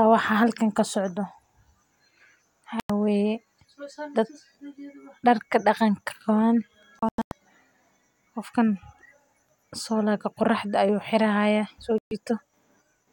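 The receiver lost good frames three times and muted, a digital broadcast dropout. At 2.8 s the speech cuts for about 0.1 s. After "darka daqanka qawan", from 6.99 to 7.32 s, several short holes totalling about 0.22 s break the sound. After "xira haya so", at 11.98 s, about 0.13 s vanishes. The gap lengths fit roughly 32 ms frames.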